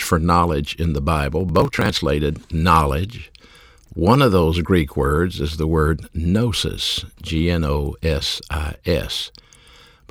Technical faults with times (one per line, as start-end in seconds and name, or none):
1.40-1.95 processor overload crackle